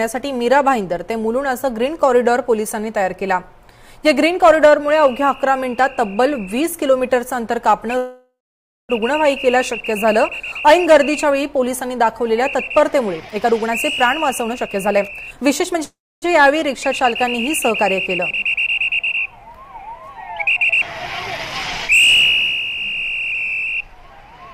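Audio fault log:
7.97–8.91 s and 15.84–16.24 s, call audio freeze: the last sound drags on as a fading buzz, then falls silent for about 0.55 s and 0.27 s, and resumes where it stopped with nothing lost. The likely cause is delayed packets draining the jitter buffer, adding 0.92 s and 0.38 s of delay.
13.07–15.79 s and 23.95–24.54 s, jitter buffer speed-up: the sound hurries at 122% and then 109% of normal speed with its pitch unchanged. The receiver trimmed many short pitch-period slices to shrink an overfull buffer, removing roughly 0.7 s in the first stretch and 70 ms in the second.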